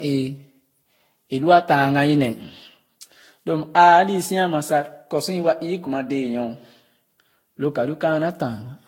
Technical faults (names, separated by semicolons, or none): generation loss